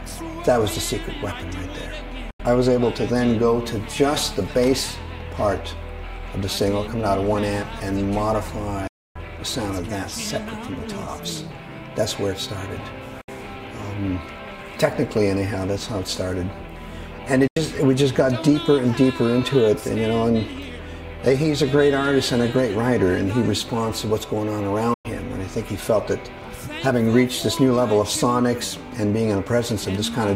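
Bluetooth dropout at 2.30, 8.87, 13.21, 17.47 and 24.94 s: the sound cuts to silence for about 85, 277, 64, 85 and 107 ms, then resumes further along, as if it had kept playing. This is likely wireless data arriving too late and being discarded.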